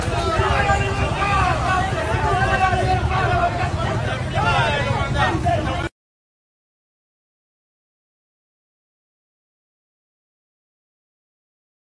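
No technical faults can be heard anywhere in the recording.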